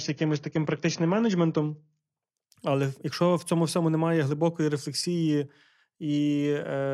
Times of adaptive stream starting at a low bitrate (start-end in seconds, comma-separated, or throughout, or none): 0.00-2.00